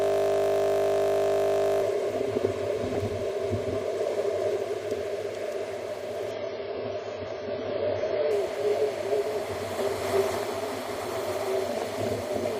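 Right from the start until 1.81 s there's a system hang loop: the system froze while the hardware kept replaying one 20 ms chunk, about 90 times, giving a steady 50 Hz buzz. From 6.31 to 8.31 s, the adaptive stream switches to a lower bitrate. Everything above 7 kHz vanishes, and codec artefacts thicken, which fits a drop from 96 to about 16 kbit/s AAC.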